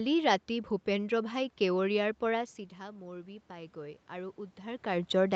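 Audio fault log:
2.96–5.16 s, automatic gain rising: after the talker moves away around 2.5 s, the level at the microphone falls by about 14 dB, and the gain control slowly climbs to compensate, adding about 4 dB over roughly two seconds. Voice and room noise swell together. On the waveform the envelope widens gradually rather than in a step, and on the spectrogram the background floor brightens alongside the voice across the whole band.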